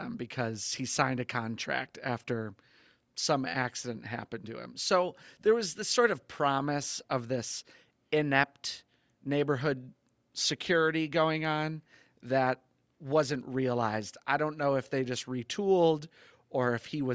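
Nothing stood out on listening to this speech, which shows the usual call microphone processing: nothing above 8 kHz and the lowest bass trimmed away, as expected.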